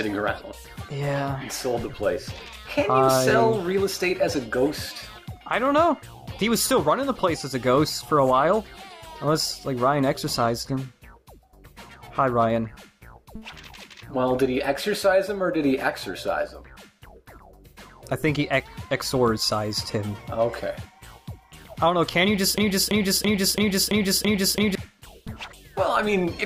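At 22.58 s a broken-record loop begins: a fragment about 334 ms long plays seven times in exact, back-to-back succession until 24.75 s. The repeats are identical, with no variation between passes, which gives the stuttering, mechanical character. The likely cause is a stall in the player, encoder or stream that kept resending the last buffered fragment. Whatever sound belonged in that span of just over two seconds never plays and is lost.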